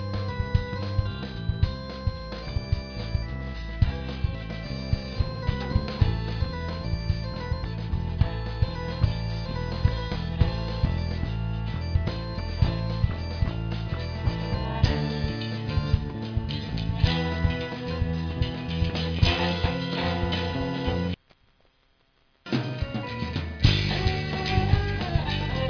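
No technical faults can be heard anywhere in the audio. Nothing interrupts, distorts or disturbs the sound at any point.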